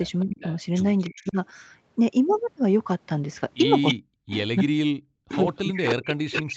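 From 0.23 to 0.38 s the voice dips by about 20 dB, then again from 1.10 to 1.37 s by about 35 dB. This is speech suppressed in double talk, likely an echo canceller ducking the near talker while the far side also speaks.

Between 0.39 and 1.31 s a faint copy of the voice trails 312 ms behind, about 20 dB down. That is an echo leak, likely loudspeaker sound the canceller failed to remove. Its fixed delay separates it from room reverberation.

From 3.86 to 4.44 s the echo leak returns much louder, only about 5 dB below the voice. From 3.94 s to the end the speech is suppressed again, by up to about 40 dB. From 5.31 s onward the echo leak persists alongside it.

At 5.47–5.49 s one 20 ms stretch sounds rougher and noisier but has no gap. That is a lost packet rebuilt from error correction: Opus played the low-bitrate copy from the next packet.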